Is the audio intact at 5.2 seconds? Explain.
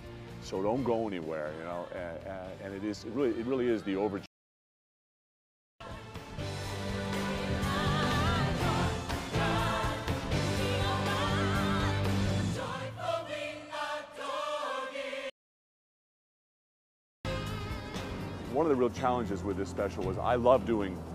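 No. At 5.2 seconds the sound is in a playback stall. It stops mid-flow at 4.26 s and stays silent until 5.80 s, about 1.5 seconds. The likely cause is the player running out of data or its thread being blocked.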